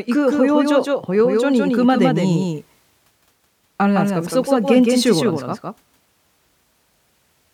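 From the start right through to the end, there's a doubled audio track: a second full-band copy of the speech trails about 150 ms behind, maybe 5 dB down, with no decay or room colour, so everything sounds smeared and echoey. Likely a second, slower capture path being mixed in.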